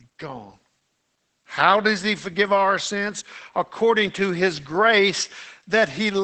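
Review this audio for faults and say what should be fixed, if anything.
Opus voice compression runs through the whole speech clip. At a rate that fits about 12 kbps in wideband SILK mode, the linear-prediction coder rebuilds the voice from a coarsely coded excitation and drops everything above 8.7 kHz. The result is plainly audible damage: a muffled, hoarse, slightly robotic sound. Prevent it by encoding at a higher bitrate, or avoiding this compression step, so the coder keeps full bandwidth and finer excitation.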